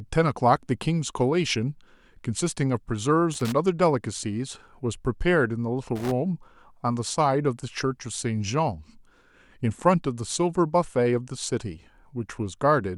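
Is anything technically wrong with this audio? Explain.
Yes. This speech clip has loose connector crackle in two short bursts, from 3.34 to 3.52 s and from 5.96 to 6.11 s. A worn or dirty contact is making and breaking as it shifts, so the signal is chopped on and off, with pops where any DC on the line jumps. Each burst sounds like irregular scratching rather than the single, evenly spaced clicks of a digital dropout or buffer fault.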